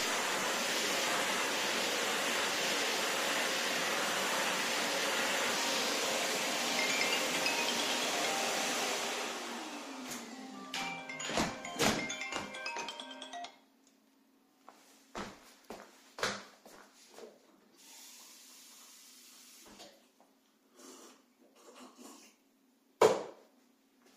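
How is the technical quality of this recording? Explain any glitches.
Nothing here needs explaining, since the recording runs along without a single glitch to point out.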